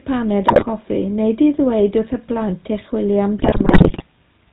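Throughout the speech the GSM full-rate codec is plainly audible, with the buzzy, gravelly texture of the original 13 kbps GSM scheme. The decoder rebuilds the voice by passing a sparse, regularly spaced pulse excitation through a vocal-tract filter, so the natural fine structure is replaced by a coarse rasp. The band stops at 4 kHz, which leaves the sibilants dull.

From 0.48 to 0.67 s, GSM bit errors break up the signal. Corrupted filter, pitch and gain values reach the decoder, so individual frames come out with a bent spectrum or a sudden jump in level. The result is a short burst of squawks and pops. A longer stretch of the same corruption runs from 3.38 to 4.04 s. The speech turns into a sustained gargling, broken by repeated squawks, which points to a run of consecutive damaged frames.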